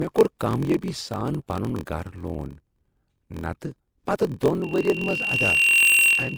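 Speech carrying three faults. Transcoding between lossy codecs runs throughout: the stacked codec artefacts sound like a chain of MP3 at 96 kbit/s, then Opus at 24 kbit/s, then MP3 again. The likely cause is each later encoder spending bits on the previous one's artefacts while adding its own, so both codecs' damage is heard at once. Content stops at the lowest cut-off in the chain.

A block size mismatch (padded) also lasts the whole clip. A steady 43.1 Hz buzz underlies everything, and the speech runs at 0.938 times normal speed with its pitch about unchanged. That fits one stage writing blocks of roughly 960 samples into a stage reading 1024-sample blocks at 44.1 kHz. The shortfall in each block is filled with silence, so a tiny gap recurs at the block rate and stretches the timing.

A loudspeaker feedback squeal starts at 4.62 s and continues to the end at 6.38 s. A 2.8 kHz tone swells over about a second until it sits roughly 10 dB above the speech. 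A microphone is picking up the loudspeaker it feeds, and at 2.8 kHz the loop gain exceeds one. That frequency then reinforces itself on every pass and keeps growing until something limits it.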